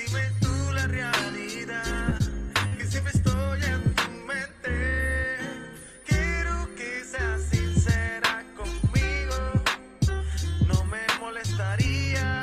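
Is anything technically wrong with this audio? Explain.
Yes. Short concealed packet loss occurs three times: at 2.09 to 2.13 s and 2.17 to 2.22 s, about 20 ms of audio each went missing, and at 2.68 to 2.73 s about 40 ms. The receiver bridged each gap by extrapolating the preceding sound, then blended back. Each gap is audible as a brief smear or wobble. On a spectrogram, the patches show smoothed, repeated harmonics or shaped noise. On the waveform, voiced patches show suspiciously periodic cycles.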